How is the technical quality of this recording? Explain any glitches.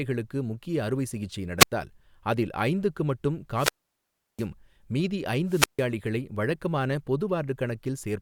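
The recording has three wireless microphone squelch dropouts. Each time, the analogue FM radio link weakens until the receiver's squelch shuts the output, so hiss swells, the speech falls to near silence, then returns. This happens at 1.58–1.72 s after "அறுவை சிகிச்சை" (muted about 90 ms), at 3.54–4.47 s after "அதில் ஐந்துக்கு மட்டும்" (about 700 ms), and at 5.47–5.88 s (about 150 ms).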